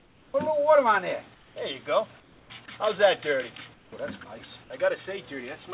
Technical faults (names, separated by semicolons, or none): comfort noise in place of the background